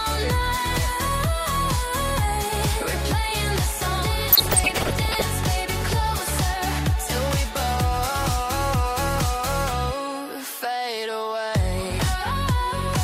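Short noise blips in single sub-bands disturb the audio from 4.32 to 5.24 s. That is DAB burbling. Weak-signal bit errors near half a percent got past error correction into the MP2 audio data.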